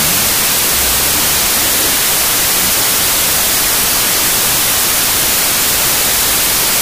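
From start to finish the speech is buried under loud hiss, slowed to half speed and an octave low. This is wrong sample width: audio written as 32-bit integers was read as 16-bit, so each sample splits into two values. One half holds the real signal's top bits, and the other is low-order bytes heard as noise. Unlike a plain sample-rate error, the slowdown comes with heavy noise, and unlike swapped byte order, the speed is wrong too.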